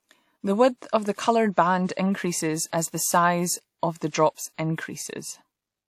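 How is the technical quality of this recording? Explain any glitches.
The recording has two brief pre-echo glitches; otherwise no further verdict is needed beyond these. At 1.15 to 1.18 s, just after "width of the", and at 4.34 to 4.37 s, a hiss of about 30 ms smears ahead of a sharp attack. The transform codec spread quantisation noise sized for the loud onset across its whole block, including the quiet moment before it.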